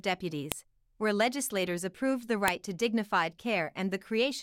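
Sharp, loud clicks snap at 0.52 s, just before "where legislators approved the", and at 2.48 s, before "to dignified": file header played as audio, where unstripped WAV header bytes between joined pieces are heard as samples.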